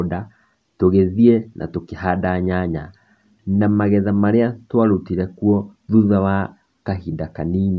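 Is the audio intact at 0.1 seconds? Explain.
Yes, the speech at 0.1 s is intact, with no audible fault at that moment.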